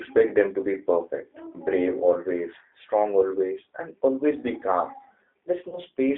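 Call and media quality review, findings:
G.729 codec damage, whole clip. Band limited to roughly 300 Hz to 3.7 kHz. Rough, slightly synthetic speech texture, plainly audible. Fits an 8 kbit/s G.729A stream rebuilding speech from filter, pitch and sparse pulses.

Packet loss concealed by the speech codec, 5.69 to 5.79 s. Brief buzzy or noisy, smeared stretch that fades, then weak recovery. Consistent with one lost 30 ms packet. Decoder extrapolated last pitch and filter, and the error carried into the following frames.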